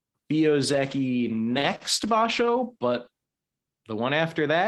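From 0.69 s to 3.91 s the speech turns rough and watery, with the brightness dulling and the consonants losing their crispness, before clearing again near the end. It is a call bitrate drop: the call's bandwidth estimate fell, so the Opus encoder, normally at 32 kbps with a 12 kHz audio band, was pushed down to 13 kbps. It held that low rate for about 1.9 s, coding the speech more coarsely and trimming its upper frequencies until the bitrate recovered.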